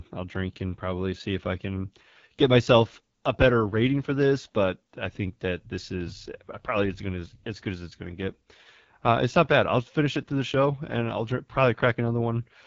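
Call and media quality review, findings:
Rough, raspy speech for the whole clip, with plainly audible coding damage; the top end stops dead at 7.5 kHz. Probable component: AMR wideband (HD Voice) codec. The pulse-excited vocal tract model is starved of bits, and the grit points to one of its two lowest rates, around 8.85 kbit/s.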